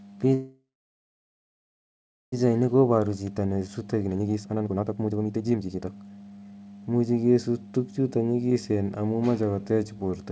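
A call audio freeze runs from 0.34 s to 2.34 s, likely caused by packets stalling in transit until the jitter buffer ran dry. The receiver stretched the last bit of speech into a brief fading buzz or hiss, then held silence for about 1.7 s. When the packets arrived, the speech resumed exactly where it had stopped, so about 2 s of dead time was inserted while nothing was lost.

A jitter buffer speed-up follows from 2.46 s to 6.73 s. Once the backlog arrived, the buffer held far more audio than its target. To claw back the roughly two seconds of added delay, the receiver repeatedly cut out tiny slices of one or a few pitch periods. The speech plays at about 146% speed with its pitch unchanged, so it sounds rushed, while the band still stops at 8 kHz, which fits a G.722 call codec.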